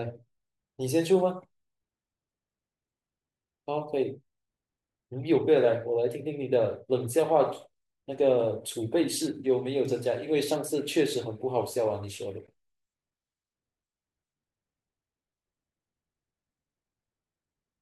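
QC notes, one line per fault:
No faults found in this clip.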